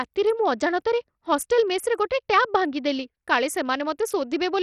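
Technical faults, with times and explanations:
Throughout, likely Bluetooth SBC compression: the treble flickers and stops at 14.6 kHz, with unshaped grit on the speech unlike hearing-model codecs, which fits about 64 kbps.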